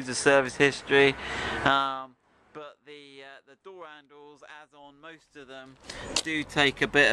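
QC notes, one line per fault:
1.68–2.18 s, zipper noise: the level drops by around 25 dB in 1 dB jumps, roughly a hundred a second, with no smoothing, so every jump clicks and you hear a ticking zip riding on the fade-down.
5.62–6.01 s, zipper noise: same thing in reverse. The level climbs back up around 25 dB in unsmoothed 1 dB steps at about that same rate, so the rise zips too.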